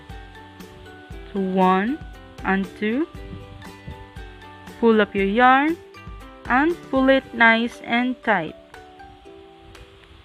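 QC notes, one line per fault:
No faults heard in this clip.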